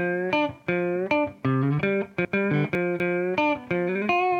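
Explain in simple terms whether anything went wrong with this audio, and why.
Something did go wrong, at 2.25 to 3.0 s: chunks out of order. The audio there is cut into quarter-second pieces, and one piece turned up late, playing two pieces after where it belonged. Nothing goes missing, but that stretch comes out shuffled, so the sound briefly jumps ahead and then back. Each place where mismatched pieces butt together leaves a hard join, which is why you hear a jumbled moment.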